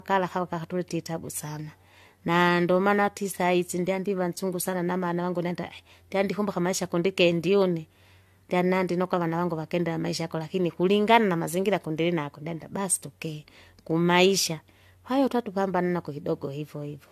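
Swirly, smeared, hollow speech with blurred attacks and nothing above 14.1 kHz throughout: generation loss, likely from about three lossy re-encodes consistent with 64 kbit/s AAC.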